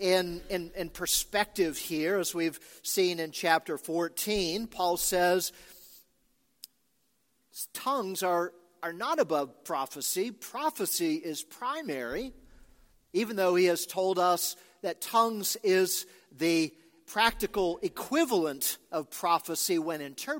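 No technical fault can be heard anywhere in the audio, and the signal stays steady and intact throughout.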